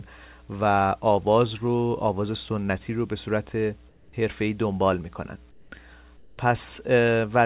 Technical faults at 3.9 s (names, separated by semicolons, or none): mains hum; comfort noise in place of the background